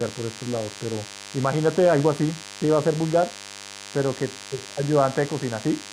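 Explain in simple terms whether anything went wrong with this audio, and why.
A thin, steady buzz runs under the speech from the very start to the very end. This is DECT cordless phone buzz. A nearby cordless phone or its base station sends a short radio pulse a hundred times a second, and the recording equipment picks up those pulses and turns them into sound. The result is a 100 Hz hum with a harsh, raspy edge, sitting beneath the speech.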